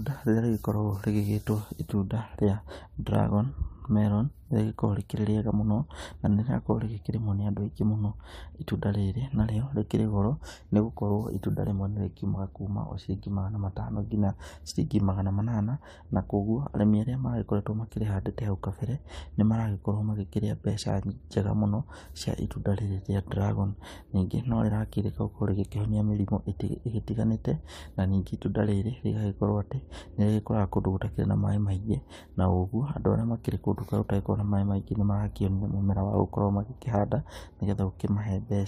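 No technical faults can be heard anywhere in this speech.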